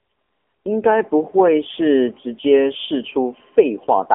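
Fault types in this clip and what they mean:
AMR narrowband mobile codec: speech squeezed into an 8 kHz phone channel at a rate around 8 kbps, nothing above 3.6 kHz, with plainly audible buzzy, synthetic codec coloration.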